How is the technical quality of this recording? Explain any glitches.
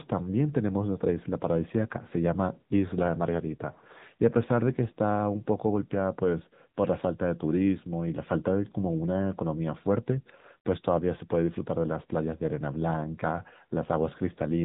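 Technical quality is poor throughout: the speech has AMR narrowband mobile codec damage. Nothing above 3.8 kHz survives, and a low bit budget, around 8 kbps, leaves voices buzzy and synthetic. Unlike a plain band-limit filter, this adds that vocoder buzz.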